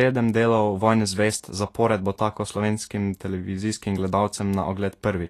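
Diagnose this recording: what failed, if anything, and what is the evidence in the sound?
The fault sits at the codec stage and runs through the whole speech clip: nothing is present above 14.2 kHz, and the upper band is plainly damaged, with hiss and grain where fine treble detail should be and roughened, softened consonant attacks. This points to Vorbis compression at a low setting, likely one near 37 kbps, where coarse quantisation of the residue above the spectral floor turns detail into noise of similar energy. Unlike broadband background hiss, the grain tracks the speech and stops at the cut-off.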